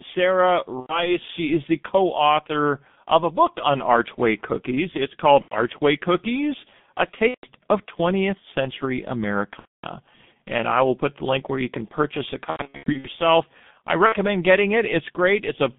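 Throughout, the speech is carried by a G.723.1 codec, and the heavy artefacts point to its 6.3 kbit/s mode. The signal is squeezed into a telephone band of roughly 150 Hz to 3.6 kHz, and the coarse 30 ms framing updates the vocal model only slowly. As a result, the voice sounds muffled and hoarse, and consonants smear into one another instead of landing crisply.

On top of that, VoIP packet loss is concealed by the speech codec at six points: 0.80 to 1.16 s, 5.42 to 5.56 s, 7.28 to 7.46 s, 9.59 to 9.86 s, 12.50 to 13.08 s, and 14.06 to 14.16 s. Each time packets go missing, the decoder keeps repeating its last pitch and filter at a decaying gain. That fills the hole with a fading buzzy tone or coloured noise, and the voice stays weak or distorted for a moment after the packets return. The gaps range from 60 ms to 240 ms, which fits runs of two to eight lost 30 ms frames. The longest stretch of damage comes right after "you can purchase a", where 360 ms of losses are scattered across about 540 ms in bursts of up to 90 ms, so the sound stutters repeatedly.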